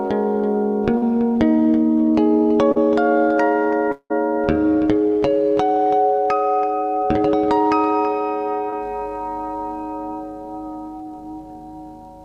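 At 0.97 to 1.04 s and again at 2.72 to 2.78 s there is a brief smear or wobble in the audio, each covering a gap of about 40 ms. Both are short concealed packet loss: a few packets arrived too late for the decoder, so the receiver extended the preceding sound, following its pitch if it was tonal or filling with shaped noise if not, then crossfaded back into the real signal.

From 3.92 to 4.12 s the audio gives way to a fading continuation of the last sound, as a buzz or a hiss, which thins into about 60 ms of silence before the audio resumes further along, with roughly 180 ms of material never heard. This is likely a long network dropout, where nothing reached the receiver for that stretch and concealment ran out before the stream returned.

At 8.70 to 8.74 s a shorter smear of the same concealed-loss kind patches a gap of about 20 ms.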